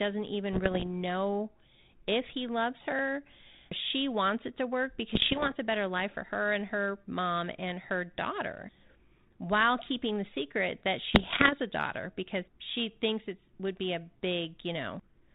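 Bit errors on an ADPCM link hit the speech at 0.53 to 0.88 s, before "know if he loves". They recur at 5.14 to 5.54 s and at 11.1 to 11.53 s. Flipped bits derail the decoder's step size and predictor. Each burst gives pops and rough, jumpy level. The first is lighter; the later two are denser.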